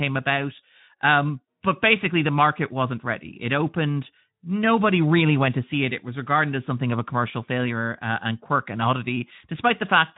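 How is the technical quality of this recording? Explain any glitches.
No glitches here; the speech runs without faults.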